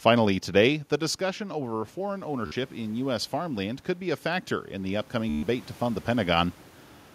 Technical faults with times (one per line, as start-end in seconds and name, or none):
1.00-6.41 automatic gain rising
2.46-2.52 Bluetooth stutter
5.29-5.43 Bluetooth stutter